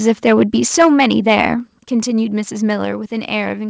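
From 0.07 to 0.43 s, and again from 0.74 to 1.53 s, the loudest peaks get squared off with a harsh crackle, about 4 dB and then about 7 dB past the converter's limit, with roughly 2 percent of samples clipped. That's likely microphone overload hitting the converter's limit. At 0.82 s, right in the middle of that second stretch, and again at 1.83 s, everything suddenly drops, about 2 dB and then about 5 dB. Those are probably the call software stepping the microphone volume down in response to the clipping.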